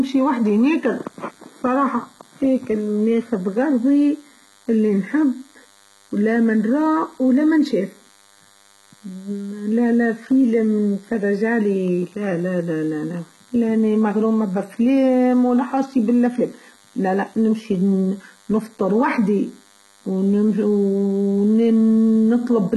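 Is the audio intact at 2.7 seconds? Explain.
No. At 2.7 seconds the speech carries a DECT cordless phone buzz that runs through the whole clip. A nearby DECT handset or base sends a radio burst every 10 ms. The audio circuit rectifies it into a thin, steady 100 Hz buzz with many harmonics. It sits well below the speech.

The treble is also heavily damaged. Nothing is present above 11.8 kHz, and the upper band sounds synthetic, gritty and lispy on s sounds. This is likely HE-AAC compression at a low bitrate, around 16 kbps. It rebuilds the treble by copying lower bands upward, so the harmonics no longer line up.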